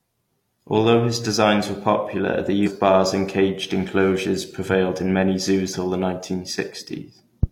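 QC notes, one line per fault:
2.62–2.68 s, compressed frames skipped: after "designs were popular the", about five 43 ms frames are lost, jumping roughly 200 ms ahead.
5.70–5.75 s, compressed frames skipped: after "enclosures prevailed in many", about four frames vanish, skipping roughly 150 ms.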